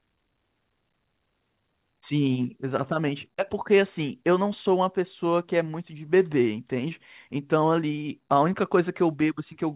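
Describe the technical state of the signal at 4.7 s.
At 4.7 s the speech is intact, with no fault present, only the narrowband character of the G.711 A-law call path, which leaves nothing above 4 kHz.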